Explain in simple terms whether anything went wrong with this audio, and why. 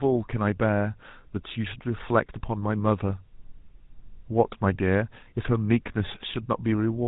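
The whole clip, start to finish, has a buzzy, gravelly roughness from the GSM full-rate codec, an old phone codec that rebuilds speech from coarse pulses and drops everything above 4 kHz.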